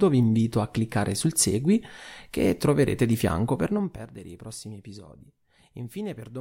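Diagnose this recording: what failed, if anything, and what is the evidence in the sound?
Nothing in this speech recording points to a failure at any stage of the chain. The level shows no abrupt jumps or steps, which is what a working gain path sounds like.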